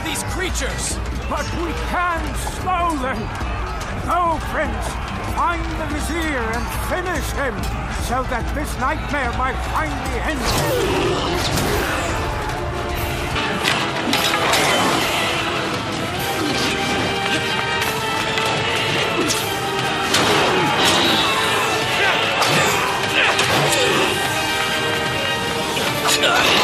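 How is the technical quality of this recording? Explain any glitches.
The first half is clean and full-range, but there's one glitch: at 13.36 s the sound changes character and stays that way to the end. Everything above 13 kHz disappears, so the top end goes duller, and a faint new background noise appears well below the signal. There's no gap at the changeover and the level barely shifts. That's most likely the input switching to a poorer device with a narrower band and its own noise floor.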